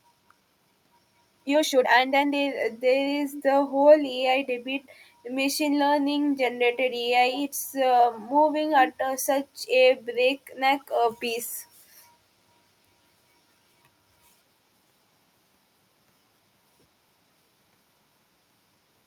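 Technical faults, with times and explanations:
0.00 to 2.48 s, time-stretched section: the opening speech runs at about 1.7 times normal pace, then snaps back to a normal pace while the pitch never moves. It sounds rushed. That's likely a stretching algorithm squeezing this stretch to fit a shorter slot, keeping pitch steady by cutting out short slices of the waveform and butting the remaining pieces together.
3.31 to 3.43 s and 4.83 to 4.89 s, echo leak: brief scraps of the talker come back 133 ms late, a faint shadow just behind the original. The first sits at roughly 15 dB under the speech, and the second is barely there at around 35 dB down. Likely cause is a far end on speakerphone whose echo canceller let some of its own loudspeaker output back into the mic and down the line.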